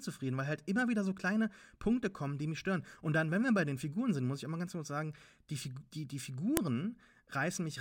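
At 6.57 s a sharp, loud click cuts into the speech: a file header played as audio. A new WAV piece was joined on without stripping its header, so a few dozen bytes of file metadata are read as sample values. On the waveform it shows as a narrow spike lasting about a millisecond; on the spectrogram, a thin vertical line spanning the whole frequency range, unrelated to the surrounding speech.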